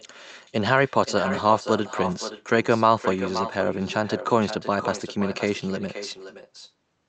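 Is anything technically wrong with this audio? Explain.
Yes. Throughout the speech there is an echo with no canceller. The far end's loudspeaker feeds back into its microphone, and nothing removes it, so each phrase returns about half a second later, roughly 11 dB quieter and thinner. On a waveform, every burst has a smaller trailing copy, and a spectrogram shows the same, fainter, across its content up to the 8 kHz codec cut-off.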